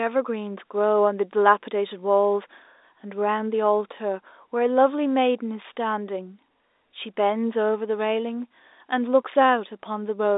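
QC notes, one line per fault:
No faults found in this telephone-band speech.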